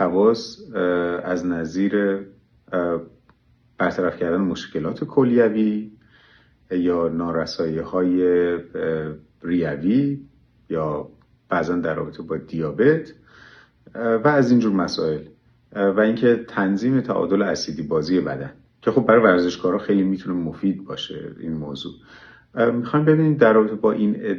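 No technical faults can be heard in this audio.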